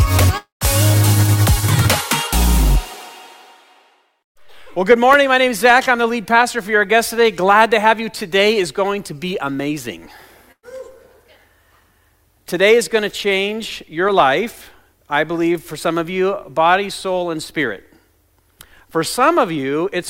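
At 0.37 s the sound breaks off until 0.64 s. The last sound is held as a fading buzz or hiss, then about 140 ms of near silence follows. This is likely a long network dropout. Roughly 240 ms never arrives, and playback resumes past the gap.

At 10.52 s comes a burst of packet loss, lasting to 10.66 s. About 120 ms of audio is missing. The receiver stretches the preceding sound and turns it down. About 70 ms of silence follows before the sound picks up further on.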